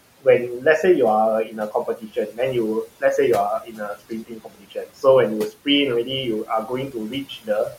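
Noise suppressor artifacts run through the whole clip. The suppressor turns down the steady room noise, which sits about 18 dB below the speech, by about 18 dB. It works frame by frame. So the background sinks in the gaps and rises under the speech.

Speech cut by the noise suppressor happens three times. The suppressor takes quiet parts of the speech for noise and lowers them. From 1.45 to 2.39 s, about half a second drops by up to about 14 dB. From 3.6 to 5.04 s, roughly a second drops by up to about 19 dB. From 6.44 to 7.77 s, a shorter stretch drops by up to about 17 dB. Each one sounds swallowed and faint.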